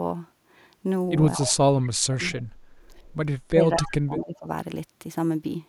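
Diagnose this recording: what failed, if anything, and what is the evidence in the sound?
Call processing failed. The speech dips at 1.37 to 1.57 s, 1.85 to 2.22 s and 3.51 to 4.48 s. The deepest drops are about 15, 35 and 20 dB. This is likely speech suppressed in double talk. The echo canceller treated the talker as loudspeaker echo and turned it down.

Call processing also shows an echo leak at 3.81 to 3.87 s. A brief copy of the speech arrives 218 ms late, about 15 dB below it. The far side's echo canceller likely missed part of its loudspeaker pickup and sent it back.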